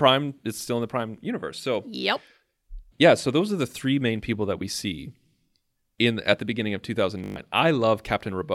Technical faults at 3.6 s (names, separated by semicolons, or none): none